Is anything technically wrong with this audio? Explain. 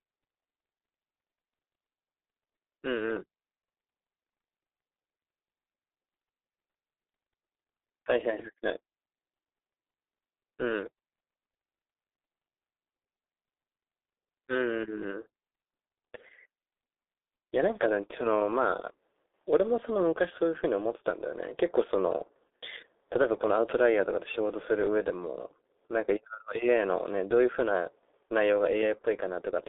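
Yes. Throughout the clip, the speech has been through the G.723.1 codec. Its 30 ms frames and heavy squeeze, consistent with about 6.3 kbit/s, leave it muffled and hoarse, with smeared consonants and nothing above 3.8 kHz.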